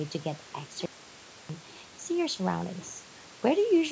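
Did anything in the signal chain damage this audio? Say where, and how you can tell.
Yes. An audio dropout to a faint residue runs from 0.86 s to 1.49 s. The speech cuts off abruptly for about 0.64 s, leaving only hiss roughly 40 dB down. This is likely an upstream driver or buffer interruption while the downstream path stayed live.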